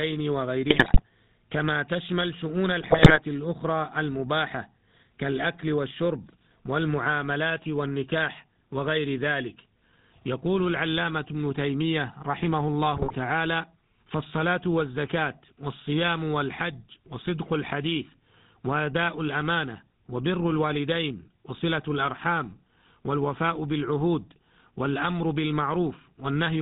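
Throughout, the speech carries the buzzy, gravelly roughness of the GSM full-rate codec, plainly audible and consistent with a 13 kbps full-rate stream. The codec rebuilds the voice from a vocal-tract filter fed by a sparse, regularly spaced pulse train, which gives the grainy rasp. On a spectrogram nothing appears above 4 kHz: energy stops at a flat ceiling, and harmonics below it look smeared and noisy rather than cleanly striated.

GSM bit errors break through at 0.7 to 1.02 s, 2.80 to 3.19 s and 12.94 to 13.15 s. Corrupted parameters reach the decoder, so filter, pitch and gain values go wrong frame by frame. The speech turns into squawks, pops and gargling. The damage fits an error rate of roughly 3 percent over a run of consecutive frames. On the waveform these stretches show sudden level spikes and blocky jumps at frame boundaries. The spectrogram shows vertical smears and warped, misplaced formant bands.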